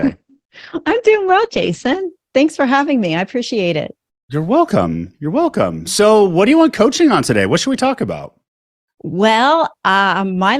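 From the start to 2.0 s the speech plays as an adaptive stream starting at a low bitrate: the player opened on a lean version to begin quickly, and the sound points to something like Opus at 12 kbit/s. Nothing reaches above 8.5 kHz, so it sounds dull, with stronger codec artefacts. At 2.0 s it steps up, probably to about 64 kbit/s, with no gap. A spectrogram shows a flat ceiling at 8.5 kHz that lifts abruptly at 2.0 s.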